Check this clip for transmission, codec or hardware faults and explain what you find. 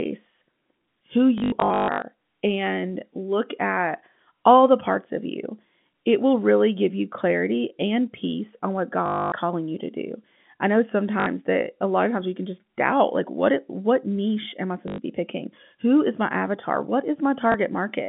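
The clip has repeated dropouts from packet loss with the last packet repeated, over a G.711 telephone line band of about 150 Hz to 3.5 kHz. The stutters occur at 1.38–2.02 s (scattered, longest run 140 ms), 9.06–9.32 s after "and peace on what", 11.20–11.26 s after "to do I know", 14.88–14.98 s after "what niche am I", and 17.52–17.54 s. Lost packets were replaced by copies of the previous one, which fits 20 ms packets. The result is a robotic buzz near 50 Hz, with identical repeating waveform blocks every 20 ms.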